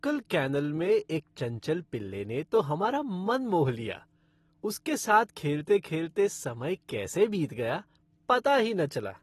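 AAC compression runs throughout the speech, from start to finish. Nothing is heard above 12.5 kHz, and the codec damage is plainly audible: the speech sounds dull and smeared, with a fizzy, warbling edge on sibilants and held sounds. This is likely an AAC-LC encoder starved of bits, which fits a low bitrate around 32 kbps, forcing it to drop the top band and coarsely quantise what remains.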